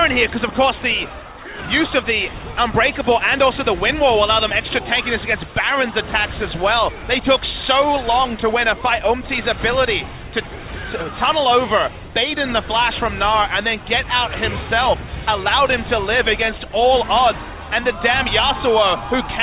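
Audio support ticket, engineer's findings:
No faults found in the recording. No dropouts, distortion or timing problems were heard anywhere in the audio.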